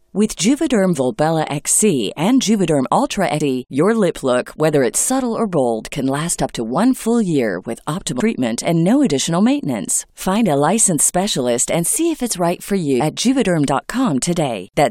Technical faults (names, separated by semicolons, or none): audio missing between chunks